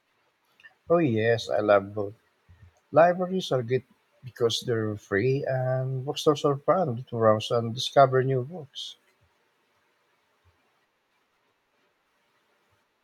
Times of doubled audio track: none

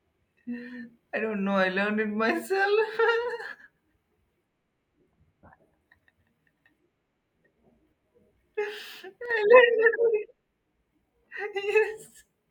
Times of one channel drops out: 9.26-9.31

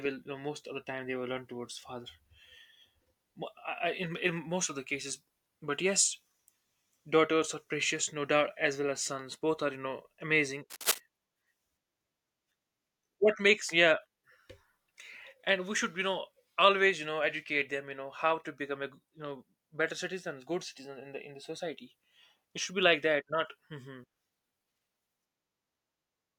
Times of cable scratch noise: 10.70-10.98

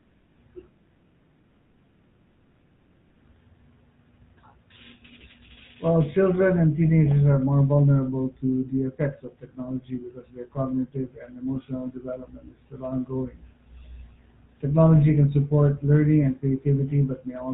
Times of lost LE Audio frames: none

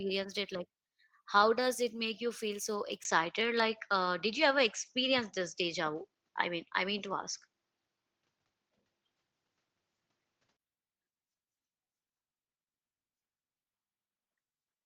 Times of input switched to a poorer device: 3.03-10.59

